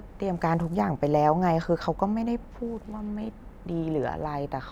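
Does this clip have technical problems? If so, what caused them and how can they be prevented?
No, this clip has no technical problems, so there is nothing to trace or prevent.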